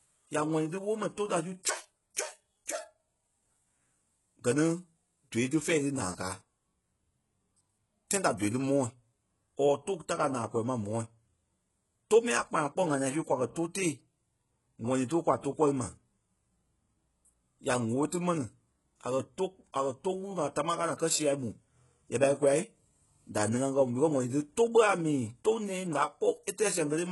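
From the first moment to the end, the treble of this speech has a synthetic, gritty quality, with s sounds turning lispy and metallic and nothing at all above 11.5 kHz. The likely cause is HE-AAC compression at heavy damage, which fits a bitrate around 12 kbps. Only the lower band is truly coded, and the top is rebuilt by copying lower bands upward, so harmonics misalign across the join. Plain low-pass filtering would sound dull and clean instead.

At 1.63 s, a pre-echo appears: about 17 ms of hiss comes just before a sharp attack, which sounds softened and smeared. Because the codec spreads quantisation noise across its whole block, the noise sized for the loud onset leaks into the quiet moment before it. Unlike a click or dropout, it is a brief wash of noise that arrives early and is tied to the transient.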